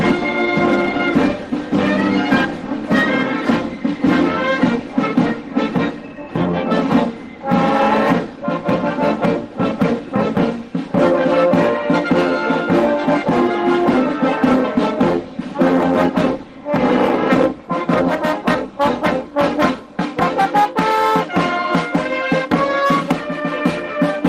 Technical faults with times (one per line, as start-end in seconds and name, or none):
none